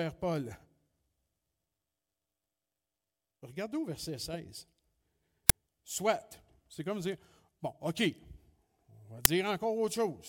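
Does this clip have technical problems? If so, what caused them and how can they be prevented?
Yes: uninitialised buffer bursts at 5.49 s and 9.25 s, each a 5.8 ms blast of garbage memory, which fits a 256-sample buffer. Unlike a dropout, it's a loud crack, not silence. Prevent it by zero-filling buffers before playback.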